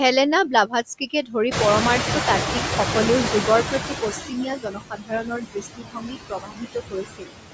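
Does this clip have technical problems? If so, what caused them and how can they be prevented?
Yes. Throughout the clip the noise sinks between the words and rises under them, typical noise suppressor artifacts as it pulls steady noise down by about 7 dB frame by frame. A gentler suppression setting or a quieter room would prevent this.

From 0.99 to 1.35 s, 3.63 to 3.95 s, and 4.11 to 7.34 s, speech sounds swallowed or faint. This is speech cut by the noise suppressor, which mistook speech for noise and dropped it by up to about 14 dB, 8 dB and 22 dB respectively. In the last stretch, roughly three seconds of speech are turned down. Less aggressive suppression, or a microphone placed closer to the talker, would prevent this.

From 1.51 to 4.3 s, the room noise suddenly jumps by about 20 dB near 1.5 s and first comes through with less reduction. It then sinks over 2.79 s as the noise suppressor catches up, ending up about 15 dB lower. 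A suppressor with faster noise tracking, or keeping loud noise sources out of the room, would prevent this.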